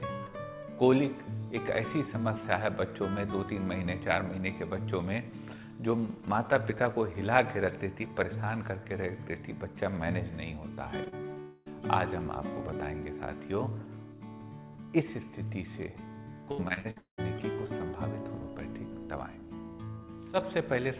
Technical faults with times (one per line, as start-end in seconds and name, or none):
11.04-11.38 short concealed packet loss
11.40-11.68 long network dropout
16.52-17.20 repeated packet loss (robotic sound)